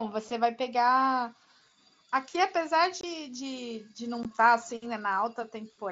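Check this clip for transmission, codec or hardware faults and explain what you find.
Two short dropouts are audible, both from unconcealed Bluetooth headset packet loss, heard through a wideband mSBC link that carries speech up to 8 kHz with light grain. At 3.01 to 3.04 s and at 4.23 s, lost headset packets were replaced by silence or an idle pattern rather than patched. The first gap lasts about 22.5 ms and the second about 15 ms, which points to whole codec frames going missing. Each gap sounds like a short hole in the speech with abrupt edges. On a spectrogram it appears as a thin full-height vertical gap, and on a waveform as a break with sharp edges.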